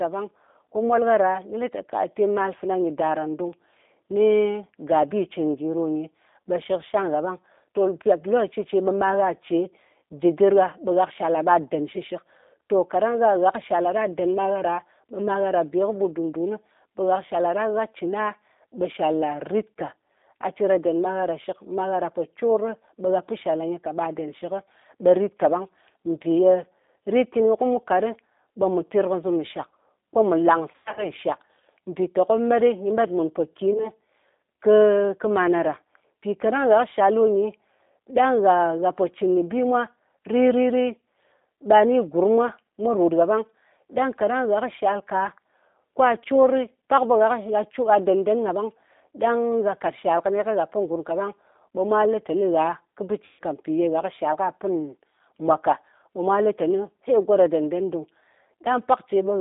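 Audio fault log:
throughout, G.729 codec: The speech was squeezed through a low-rate CELP voice coder, most likely G.729A at 8 kbit/s, which rebuilds each stretch of sound from a vocal-tract filter, a pitch predictor and a handful of pulses instead of keeping the waveform. The line passes only about 250 Hz to 3.7 kHz, so the voice is thin and telephone-like. The coarse pulse model gives a plainly audible rough, slightly synthetic texture.
30.72–31.06 s, 33.73–33.87 s and 53.25–53.40 s, VoIP packet loss concealed by the speech codec: Packets went missing and the decoder filled the gaps by stretching its last pitch and filter while turning the gain down. After "mù lang" about 160 ms is lost across 240 ms, with a longest run of 100 ms. Later come a single 20 ms gap and a 140 ms gap. Each shows as a fading buzzy tone or coloured noise, and the voice stays weak briefly afterwards while the decoder's memory recovers.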